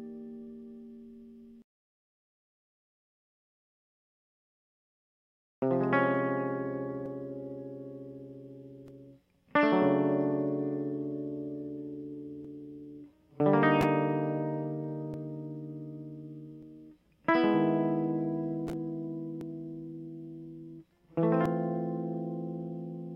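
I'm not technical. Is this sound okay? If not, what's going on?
No. There are dropped buffers (overruns) at 7.06, 12.45, 15.14, 16.63, 19.41 and 21.46 seconds. Each is a spot where the music jumps ahead. Likely the recording software fell behind and lost about a tenth of a second each time, about twice that at 21.46.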